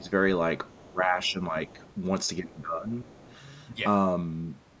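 From 0.0 to 0.1 s the speech dips by around 10 dB. This is speech suppressed in double talk. The likely cause is an echo canceller that heard both sides at once. It could not tell the local talker from the loudspeaker echo, so it turned everything down.

At 0.7 to 0.84 s a faint second voice appears. This is the other side's voice leaking through. It sits roughly 30 dB below the speech. It is brief. Some of the far end's loudspeaker sound likely stayed in the microphone signal after echo cancelling.

From 0.85 to 1.78 s the speech is suppressed again, by up to about 15 dB. The dips add up to about half a second. The talker sounds ducked and patchy.

Leakage returns at 1.72 to 1.91 s, overlapping the end of that dip.

From 2.41 to 3.07 s the speech drops by up to about 15 dB again, for about half a second in total. At 3.07 s the leaking voice comes back and lasts until 3.38 s, again very faint.

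Throughout, the call's microphone processing limits the audio to 8 kHz.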